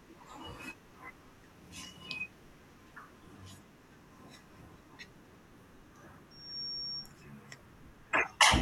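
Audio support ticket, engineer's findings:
Piercing single tone near 5.5 kHz, swelling over roughly a third of a second to about speech level. 6.31–7.13 s. Loudspeaker feedback squeal: mic-to-speaker loop gain exceeding unity at that frequency, self-reinforcing until broken.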